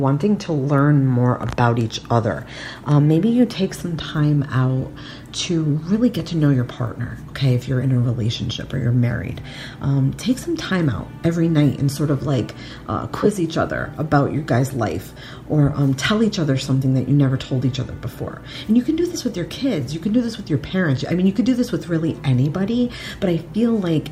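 No technical faults detected.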